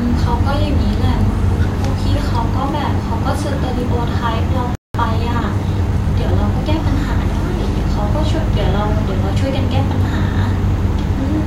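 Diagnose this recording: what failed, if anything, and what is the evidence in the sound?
Playback stage: a playback stall cuts the speech to silence from 4.75 to 4.95 s, roughly 195 ms, before it resumes, likely from the player's buffer running dry.

Time-compressed catch-up follows from 4.95 to 6.89 s. Speech runs 1.1 times fast at normal pitch as short cross-faded segments are dropped.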